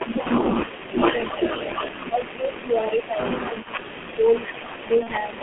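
The whole clip runs through the G.723.1 codec at around 6.3 kbit/s, squeezed into a 200 Hz to 3.4 kHz telephone band. It's heavily damaged: muffled, hoarse speech with smeared consonants, because the slow-updating voice model can't keep up. An echo leak sits under everything from the start. It's a copy of the speech trailing about 451 ms behind at roughly 10 dB down, likely from a loudspeaker at the far end whose echo canceller didn't fully cancel what its microphone caught. On top of that there's speech suppressed in double talk at 0.0 to 0.96 s, 1.98 to 3.21 s, 3.46 to 4.26 s and briefly at 4.53 to 4.6 s. The level sags or breaks up in patches, at worst by about 20 dB in the second stretch, likely because the canceller mistook overlapping talk for echo and ducked it. Finally, VoIP packet loss concealed by the speech codec shows up at 5.03 to 5.10 s. About 30 ms went missing, which fits a single lost frame, and the decoder papered over it with a stretched, fading extension before recovering.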